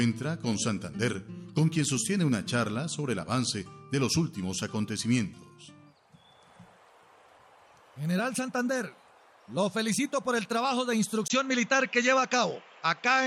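At 11.28 s the recording input was likely switched to a poorer device, which then carries the sound through to the end. A brief gap of about 20 ms marks the switch. From there nothing is passed above 7.6 kHz, so the top end is lost and the sound turns duller and boxier. The level stays about the same, but a faint new background noise appears, sitting well below the signal.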